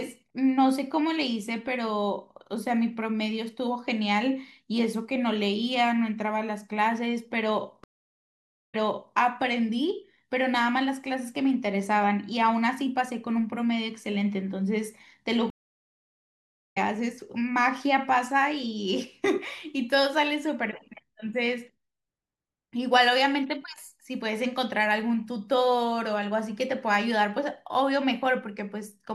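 Speech clip with two stream reconnects. At 7.84 s it goes silent for 0.9 s and resumes 0.43 s earlier, repeating a bit. At 15.50 s it drops for 1.26 s and returns roughly a second later, skipping ahead. Both times the connection broke and the player restarted its decoder mid-stream.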